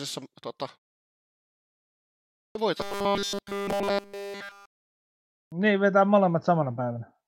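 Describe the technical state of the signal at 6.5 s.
At 6.5 s the speech signal is intact, with no fault present.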